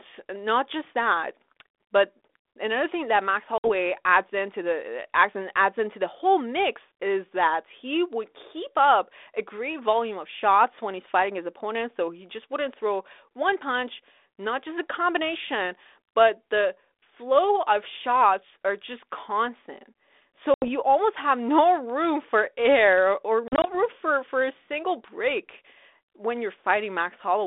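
Speech over a G.726 ADPCM telephone link, band-limited to roughly 300 Hz–3.6 kHz, suffers packet loss on an ADPCM call. There are hard 60 ms and 80 ms silent gaps at 3.58 s (before "adds into the adds") and 20.54 s ("shots are just constant" to "almost have no room"), and 80 ms scattered over 160 ms from 23.48 s, before "for for a single". After each gap the decoder's predictor is briefly out of step, and the audio returns slightly distorted.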